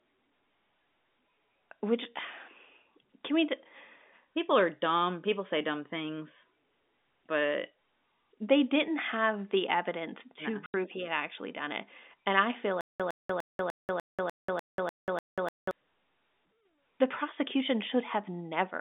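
At 10.66 s an 80 ms hole of packet loss filled with silence cuts the speech, with hard edges. Its length fits four 20 ms packets. Unlike a stutter, nothing repeats: the audio simply drops out once, then resumes.

From 12.81 to 15.71 s comes a stutter with silent gaps: a 109 ms fragment plays nine times, each followed by about 188 ms of digital silence, repeating every 297 ms. That steady replay of identical sound, heard through the narrow 200 Hz to 3.6 kHz telephone band of the G.711 link, points to a stalled stream likely retrying its last buffer.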